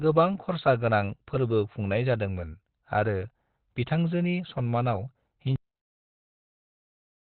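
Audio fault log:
Throughout, Opus compression: the speech sounds muffled and hoarse with nothing above 4.4 kHz, likely Opus dropping into its narrowband SILK speech mode at a low bitrate, around 12 kbps.
5.56 s, cut-off end: the speech stops dead mid-sound and falls straight to digital silence with no decay, as if the last buffers were never written.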